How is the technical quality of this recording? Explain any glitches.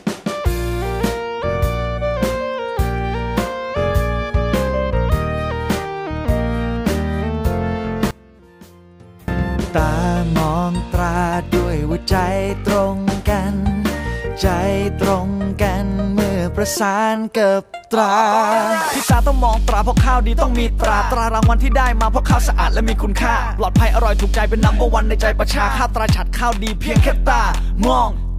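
There's one real glitch, from 8.11 to 9.28 s, where the sound suddenly collapses to a faint shadow of itself, about 24 dB down, then snaps back. That's most likely one channel inverted: with one side's polarity flipped, anything shared by both channels cancels when they're summed to mono, so the centre content drops out and only the small left-right difference survives for that stretch.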